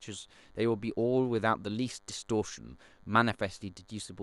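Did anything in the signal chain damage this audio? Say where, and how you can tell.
Yes. A DECT cordless phone buzz got in at the analogue wiring stage. A DECT handset or base station close to the gear sends a radio burst every 10 ms, and the audio circuit rectifies those bursts into the audio path. The result is a thin, steady buzz at 100 Hz with a dense stack of harmonics. It runs through the whole speech clip, at about 40 dB below the speech.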